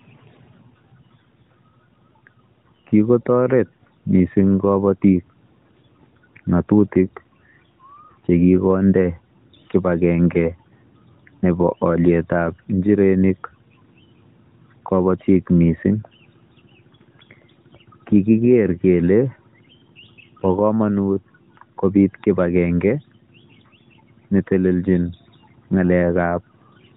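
No technical faults are audible.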